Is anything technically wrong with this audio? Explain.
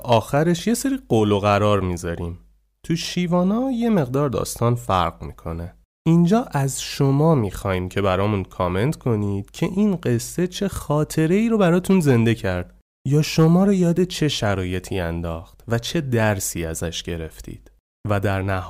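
Yes. Hard clipping appears three times in this speech: at 0.12 to 0.18 s, 11.9 to 12.16 s, and 13.17 to 13.56 s. In each stretch the signal runs past what one stage of the chain can pass, by about 5 dB in the first and about 4 dB in the other two. The peaks are sliced flat. Those squared tops create high harmonics, heard as a brief crackle and harsh edge on the loudest moments.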